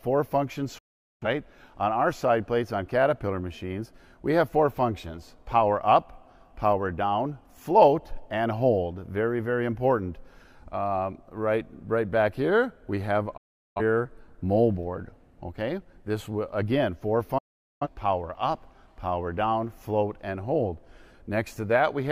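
Digital broadcast dropout: the receiver muted on lost frames, cutting the audio to silence for about 0.4 s at 0.78, 13.37 and 17.38 s.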